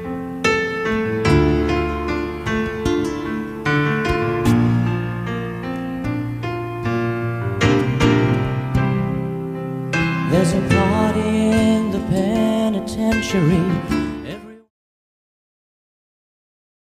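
No technical faults are audible; the level eases down in a smooth fade-out from roughly 13.5 s to 14.71 s, with no click or hard edge.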